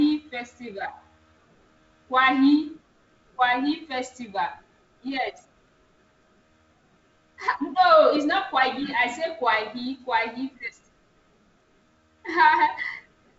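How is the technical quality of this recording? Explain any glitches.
No glitches can be heard anywhere in this recording.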